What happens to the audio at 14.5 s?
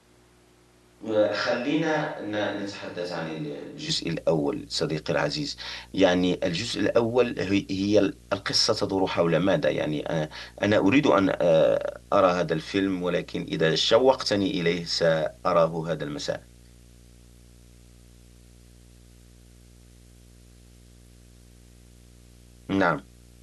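A video or display buzz sits under the speech at 14.5 s, as it does through the whole clip. A screen or video cable is leaking its picture timing into the audio, giving a buzz at the 59.94 Hz field rate with hash above it and a thin whine at the 15.7 kHz line rate, roughly 25 dB below the speech. That high line tone and the hash set it apart from plain mains hum.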